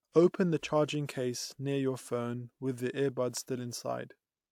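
No technical faults are audible anywhere in the recording.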